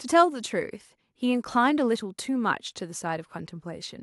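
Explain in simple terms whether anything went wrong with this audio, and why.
Listening to the recording, nothing stood out as having gone wrong with the sound.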